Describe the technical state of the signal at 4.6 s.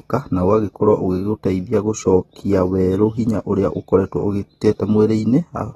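At 4.6 s the speech carries AAC compression damage that runs through the whole clip, most likely from an AAC-LC encode at a low rate, consistent with around 24 kbps. Too few bits to code each frame's frequency lines faithfully, the encoder discarded content above 13.8 kHz and quantised the rest coarsely. The result is plainly audible: a dull top end, a smeared texture, and a warbling, fizzy edge on sustained sounds and sibilants.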